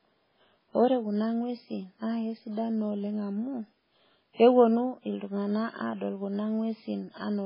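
From start to finish the speech has a hard ceiling, with nothing above 5.3 kHz, and the quieter detail swirls in and out with a watery, chirpy edge. That's likely heavy MP3 compression, with the encoder starved of bits, which fits roughly 16 kbps.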